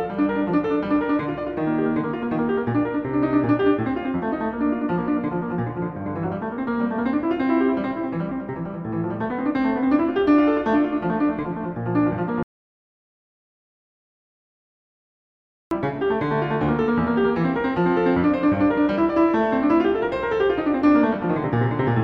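A piece of music with one clear problem: an audio dropout to silence running from 12.43 to 15.71 s. The music just stops dead mid-flow and comes back about 3.3 seconds later, and the gap in between is silent with no room tone left. That points to the input going away while the recorder kept writing silence, likely a disconnected device, a dropped link or an accidental mute. Whatever was playing in that stretch is simply gone.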